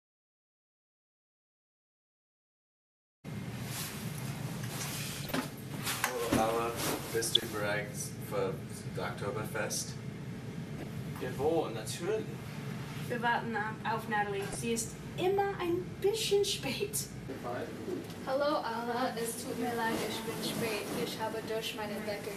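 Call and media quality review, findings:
Throughout: dull, band-limited sound with gurgling, granular texture; upper sub-bands switching in and out, coarse quantisation in the remaining bands. Likely MP2 compression starved of bits; the plainly audible damage fits an 80 kbps MPEG Layer II stream.

5.17–5.36 s, 7.22–7.43 s, 10.77–10.90 s, 14.43–14.55 s: burbling bursts over the programme. DAB burbling: residual bit errors, at a fraction of a percent, corrupting MP2 samples and scale factors, so single sub-bands blip or jump in level for up to a frame, across 7–10 frames per burst.

17.45 s: single sharp click, thin vertical line across the spectrum. Likely dropped samples, under a millisecond missing from the stream, so the waveform steps abruptly to a later value. Too brief to remove audible content.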